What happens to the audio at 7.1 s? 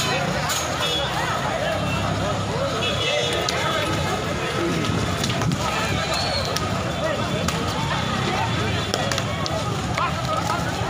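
Nothing goes wrong at 7.1 s: the audio plays through that moment intact, with no dropout, click or other fault.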